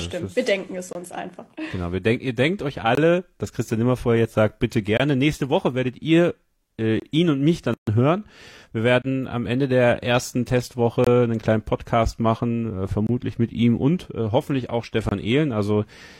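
A gap between chunks recurs because the audio was delivered in 2-second chunks with about 23 ms of silence left at each join. This cuts short holes into the speech at 0.93 s (between "wir denken es" and "uns einfach"), 2.95, 4.97 and 7.00 s (between "werdet ihr äh" and "ihn und mich"). At 7.74 s a gap at a join of encoded pieces appears: separately encoded segments kept their start delay and end padding, opening a 137 ms silence with smeared edges until 7.87 s, after which the speech resumes where it stopped. The 2-second chunk gaps then continue at 9.02, 11.04 (just before "einen kleinen"), 13.07 and 15.09 s.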